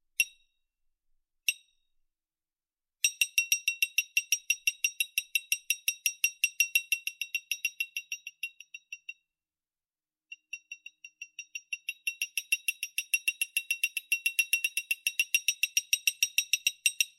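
No technical faults are audible.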